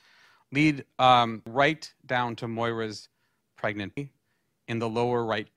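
At about 1.47 s, right after "lead um" and just before "down to", there's a quick glitch: damaged data in the compressed stream. A stretch of the encoded bytes got corrupted, so the decoder choked on those frames, lost sync and had to hunt for the next valid frame header before the speech picked up again. The same thing happens once more at about 3.97 s, another brief glitch where the stream broke up.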